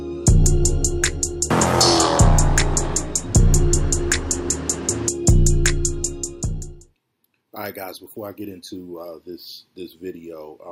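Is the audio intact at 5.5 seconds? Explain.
Yes, at 5.5 seconds the audio is intact, with no dropout, click, distortion or other fault at that moment.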